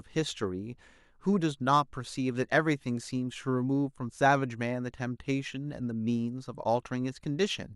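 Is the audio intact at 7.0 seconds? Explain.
Yes, at 7.0 seconds the audio is intact, with no fault present at that moment.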